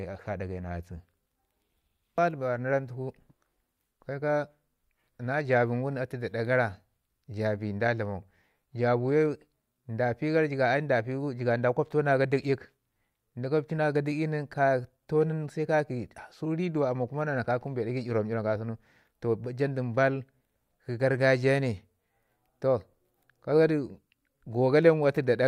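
A speech recording with nothing technically wrong with it.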